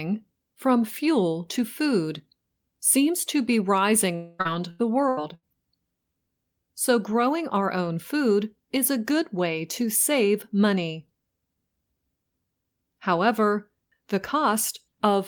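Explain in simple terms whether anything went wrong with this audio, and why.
Something did go wrong, twice in a row. From 4.15 to 4.41 s the speech stops and the last sound is stretched into a fading buzz for about a quarter second, most likely a long network dropout. Unlike brief glitches, it is one continuous hole, and the lost speech never returns.

Right after, from 4.41 to 5.45 s, comes repeated packet loss (robotic sound): four shorter holes, the longest 82 ms, each patched the same way. About a quarter of that second is filled-in sound, giving choppy speech with pieces missing rather than one single gap.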